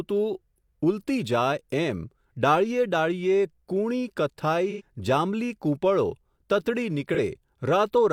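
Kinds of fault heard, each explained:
AAC frame loss with concealment: smeared, phasey patches lasting 85 and 43 ms, where the decoder filled missing audio frames from the last good spectrum.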